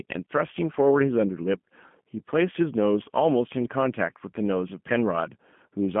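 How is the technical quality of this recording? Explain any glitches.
The quality is limited by low-bitrate telephone coding that runs through the whole clip, and the damage is plainly audible. G.729 codec, throughout: the system squeezed the speech into a narrow line band of about 150 Hz to 3.4 kHz and resynthesised it from a vocal-tract model, a pitch estimate and a handful of pulses every few milliseconds, which fits an 8 kbit/s G.729A codec. The result sounds boxy and band-limited with no highs, and the voice has a rough, buzzy, slightly synthetic texture.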